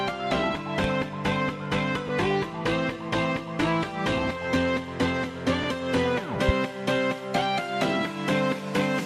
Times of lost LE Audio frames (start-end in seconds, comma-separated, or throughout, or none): 2.07-2.09, 5.63